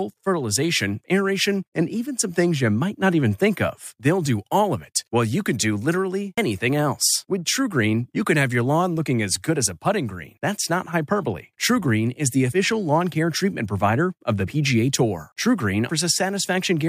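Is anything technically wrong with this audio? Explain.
Yes. Compressed frames are skipped four times: at 6.37 s after "you can do literally", at 12.52 s between "is the" and "lawn care treatment provider", at 14.47–14.49 s after "treatment provider of the", and at 15.89 s. The decoder drops whole 23.2 ms frames, two or three at a time and about seven in the last case, so the speech jumps ahead by roughly 50 to 150 ms. Overlapping neighbour frames smear each join into a soft blip. That sets it apart from a hard splice click or a dropout, which inserts a silent gap and loses no time.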